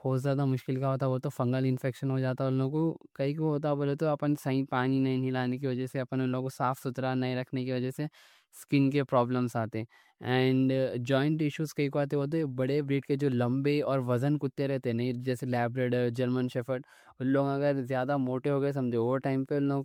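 From start to finish the speech has that swirly, hollow, smeared quality of generation loss, with consonant attacks blurred, more than a single MP3 pass around 96 kbit/s would cause. It's likely been decoded and re-encoded about five times, each pass stacking fresh quantisation noise.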